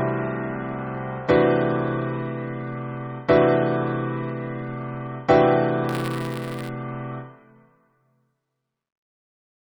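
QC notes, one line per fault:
5.89–6.69 s, buffer tearing: a robotic 172 Hz buzz rides the sound. That rate fits a 256-sample buffer whose writer and reader cross every period, splicing in a small sliver of audio from around 20 ms earlier. Unlike hum, it vanishes without signal.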